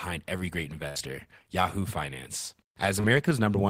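At 0.88 s, just after "every great", a burst of packet loss occurs. Roughly 70 ms of consecutive speech data failed to arrive in time to be played, and the receiver covered the hole by extending the last sound it had for about 72 ms while lowering its level. The result is a brief held, fading stretch that runs to 0.97 s, after which the speech picks up further along with that portion gone.

At 3.01 s there is a short concealed packet loss. About 30 ms of audio missed the decoder's deadline, so the receiver synthesised roughly 31 ms of continuation from the preceding sound and then crossfaded back into the real signal by 3.05 s. Because the patch is so brief, it comes across as a quick smear or small wobble rather than an obvious dropout.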